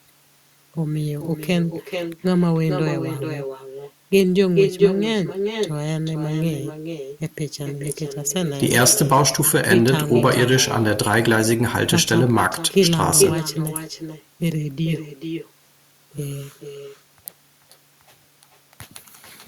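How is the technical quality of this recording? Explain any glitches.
The recording has one fault running through its whole length: echo with no canceller. Every phrase returns as a distinct, quieter copy around 0.4 s later, about 7 dB below the original and thinner in tone. The far end is evidently playing the call on a loudspeaker, its microphone picks it up, and nothing subtracts it before it travels back. Room reverberation smears into a continuous tail, but here the late copy is a separate, recognisable repeat of each phrase.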